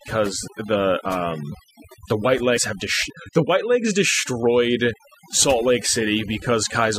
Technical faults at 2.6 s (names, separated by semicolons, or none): overdone noise removal; damaged data in a compressed stream